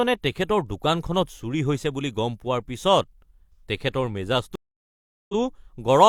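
At 4.55 s the speech cuts to silence for about 0.74 s and returns at 5.34 s. This is a stream reconnect: the connection dropped, the player went quiet, then reconnected and started a fresh decoder mid-stream, so the opening frame or two come back muted or faded in. Unlike a plain dropout, the audio doesn't pick up where it stopped. It resumes 46 ms earlier, so a brief fragment of speech repeats after the gap.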